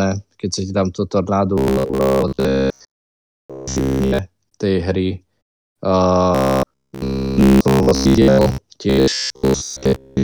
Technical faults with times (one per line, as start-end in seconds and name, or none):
1.58-4.19 robotic sound from repeated short buffers
6.35-8.58 robotic sound from repeated short buffers
8.90-10.23 robotic sound from repeated short buffers